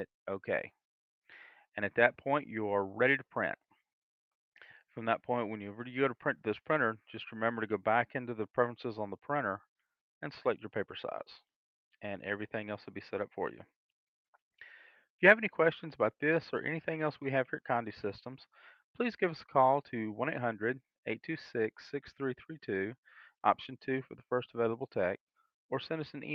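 A burst of packet loss occurs from 10.15 to 10.24 s. Several consecutive packets never arrived in time for playback, so the receiver concealed the gap by continuing the last sound it had decoded and turning it down, which fills about 52 ms with a brief held, fading tail. When playback resumes, about 60 ms of the original audio is simply gone, and the sound picks up slightly further along than expected.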